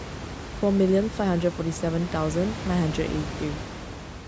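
Nothing stood out on listening to this speech, apart from some background room noise sitting about 10 dB below the voice, which belongs to the recording itself.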